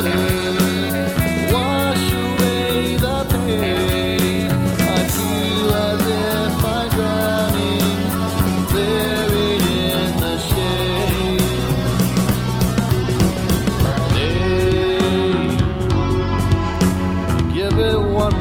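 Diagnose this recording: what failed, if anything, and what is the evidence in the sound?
Call bitrate drop at the codec stage: from 8.02 to 14.05 s the audio turns coarse and muffled, consistent with the encoder falling from about 96 to roughly 20 kbps.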